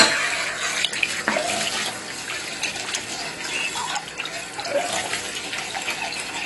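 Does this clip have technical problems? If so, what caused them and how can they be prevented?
Yes, there's AAC compression damage running through the whole clip, and it's plainly audible. Nothing reaches above 11.5 kHz, so the top end sounds dull. Sustained parts have that smeared, warbly, fizzy texture from bands being coarsely quantised or thinned out. The likely cause is an AAC-LC encode starved of bits, which fits a bitrate around 32 kbps. To prevent it, encode at a much higher bitrate or keep a lossless master and export from that.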